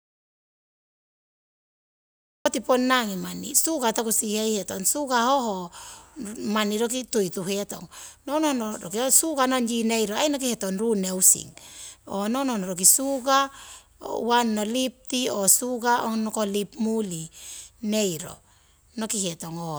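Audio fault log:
0.00–2.46 s, audio dropout to silence: the speech is already absent when the clip begins, leaving silence with no room tone, likely from a lost input while recording continued.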